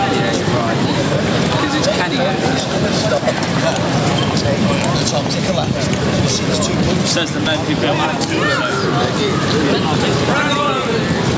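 Gain pumping runs throughout: the input gain was likely set far too high, with a fast limiter clamping it on each loud sound, so the gain swings by around 10 dB.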